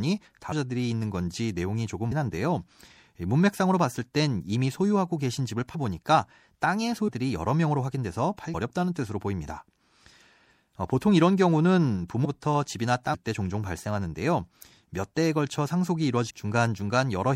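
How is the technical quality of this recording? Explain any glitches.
The quality is poor: the speech has clear codec damage throughout, and it jumps forward eight times.

Compressed frames skipped at 0.51, 2.11, 5.74, 7.07, 8.53, 12.24, 13.13 and 16.29 s: runs of frames were never decoded, so the speech leaps ahead by roughly 0.2 to 0.7 s each time. Each join is a brief smeared blip.

MP3 compression, likely at around 64 kbps: the encoder discarded weak frequency detail and treble, leaving the speech clearly watery and swirly, with dulled highs and smeared consonants.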